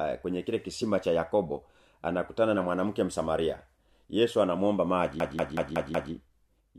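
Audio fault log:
5.20–6.13 s, system hang loop: a roughly 186 ms slice of the speech repeats exactly five times, as if the playback system froze while the sound hardware kept replaying the same ring buffer, which fits an 8192-sample buffer. At 5.38 repeats per second it comes across as a machine-gun stutter rather than a buzz. On a spectrogram, identical blocks tile side by side with sharp vertical seams at each wrap; the waveform shows the same shape copied end to end. Essentially no audio appears lost.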